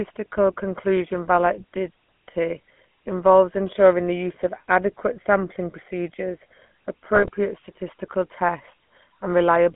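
From start to finish the speech carries GSM full-rate codec damage: a plainly audible buzzy, gravelly roughness from the coarse pulse excitation and vocal-tract modelling, in a band of roughly 150 Hz to 3.4 kHz. This points to a 13 kbps full-rate coder.

From 7.16 to 7.30 s, GSM bit errors corrupt the decoder's filter, pitch and gain values. The spectrum bends and the level jumps, so the speech breaks into squawks, pops and gargling for a burst spanning several codec frames.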